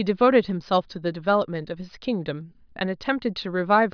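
Listening through the recording, nothing stood out as a technical problem at any point.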